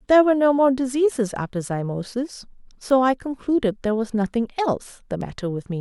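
At 2.90 s there's a bit error spike, a single sharp tick peaking around -19 dBFS, and another at 5.21 s, around -25 dBFS. A flipped bit made the value leap by a power of two for one to three samples, giving a broadband click unrelated to the speech.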